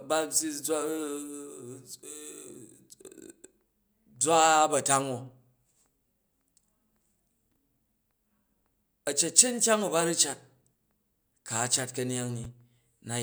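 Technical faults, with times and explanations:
12.44 s, chunks out of order: one roughly 5.3 ms slice of speech plays one slot late, after the slice that should follow it. The three hard joins give a brief jumbled moment. A waveform shows abrupt discontinuities, and a spectrogram shows thin vertical broadband lines.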